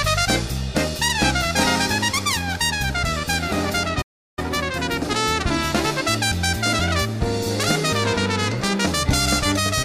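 A playback stall at 4.01 s cuts the audio to silence for about 355 ms, until 4.39 s, likely because the player ran out of buffered data or its thread was blocked. Time-compressed catch-up follows from 4.39 to 5.81 s: the player trims its backlog by dropping and cross-fading small slices, so the sound runs 1.25 times faster at unchanged pitch.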